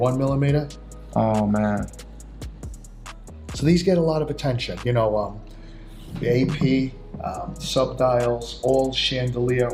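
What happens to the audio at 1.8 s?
Nothing goes wrong at 1.8 s; the audio plays through that moment intact, with no dropout, click or other fault.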